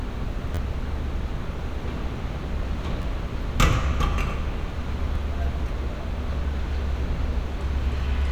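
At 0.55 to 0.58 s, 3.02 to 3.04 s and 5.16 s, a repeated buffer replays roughly 12 ms chunks, fitting a 512-sample buffer. Each is a brief buzzy stutter, seen as identical waveform segments with hard joins.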